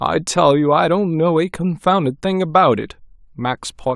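Nothing stood out on listening to this speech recording.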